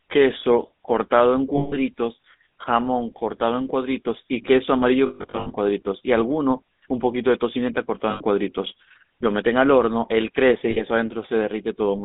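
The whole clip goes through the GSM full-rate codec. Its vocal-tract model and pulse excitation make the speech sound buzzy and gravelly. The band is narrow, roughly 200 Hz to 3.7 kHz, like a 13 kbps phone line.

Lost GSM frames come next. From 1.56 to 1.94 s, about 160 ms of sound is replaced by the last good frame. This gives a rough, metallic ring. From 5.06 to 5.52 s, dropouts are scattered over about 440 ms, with the longest run near 150 ms. Shorter rings follow from 8.10 to 8.22 s and from 10.70 to 10.83 s.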